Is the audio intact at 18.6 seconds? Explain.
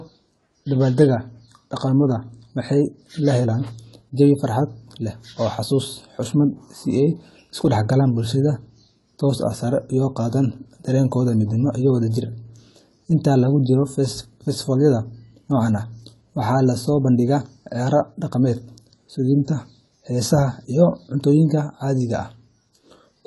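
No. At 18.6 seconds, as through the whole clip, the speech carries AAC compression damage, likely from AAC-LC at a low bitrate (the sound fits roughly 32 kbps). The encoder quantises each frame's frequency lines coarsely and drops the top band, so nothing survives above 11.5 kHz. The speech sounds dull and smeared, and sibilants and held vowels take on a fizzy, warbling texture where gaps in the spectrum open and close.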